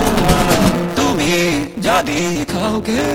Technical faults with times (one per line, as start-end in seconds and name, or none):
0.00-3.15 block size mismatch (truncated)
2.33-2.37 short concealed packet loss